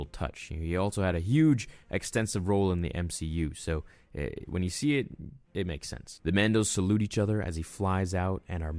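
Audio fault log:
No audible faults in this speech recording; nothing to log.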